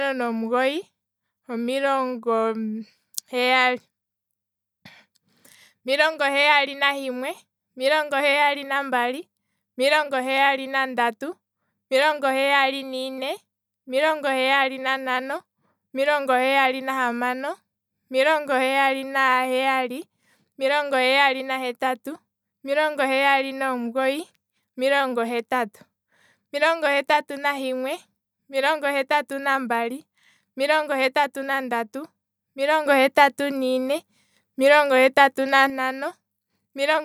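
At 32.86 s a sudden gain jump lifts the speech and its background noise by about 6 dB until 35.7 s. It was likely an unramped digital gain step, showing as an abrupt waveform and spectrogram brightness step.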